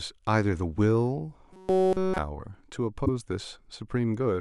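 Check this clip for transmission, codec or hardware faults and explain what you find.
Two faults are audible in this speech clip.

From 1.53 to 2.18 s the speech becomes robotic sound from repeated short buffers, a rigid metallic buzz at 188 Hz. This likely comes from the playback side running short of new audio and looping its last chunk, which fits a buffer of about 5.3 ms repeated throughout the stretch.

From 3.02 to 3.09 s there is a brief glitch caused by damaged data in a compressed stream. Corrupted bytes make the decoder misread those frames and lose sync until it finds the next valid frame header, briefly disrupting the output.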